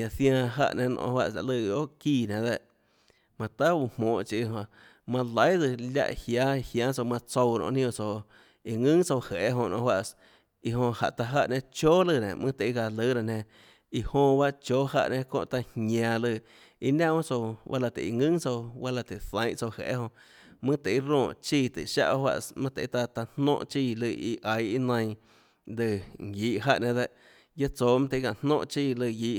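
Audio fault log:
No fault is heard in this speech clip.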